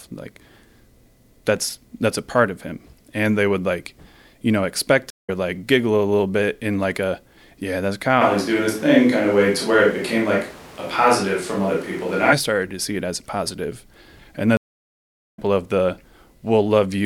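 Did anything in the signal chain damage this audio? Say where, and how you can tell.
Yes, the damage sits in two places.

The first is at the network stage: a stream reconnect, heard twice. After "like you know expect" the audio drops into 0.18 s of silence from 5.10 to 5.30 s and comes back at "like giggle a little", about a fifth of a second further on. After "as a positive and" there is a longer gap, about 0.81 s from 14.57 to 15.39 s, resuming at "of the" roughly 0.7 s later. The connection dropped, the player went quiet, then rejoined the live stream where it now stood, so the lost stretch is simply skipped. On a waveform each gap is a flat line that fades back in, and the content on either side doesn't join up.

The second is at the capture stage, most likely a switch to a distant microphone, from 8.23 to 12.31 s, between "like a yeah that's" and "started to see it". The sound turns roomy and hollow instantly, with less bass, and the background noise rises to roughly 25 dB below the speech, while the overall level barely changes. 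It snaps back just as suddenly. A spectrogram shows a raised noise floor, smeared reverberant tails, a weaker low band, and sharp vertical boundaries at both ends.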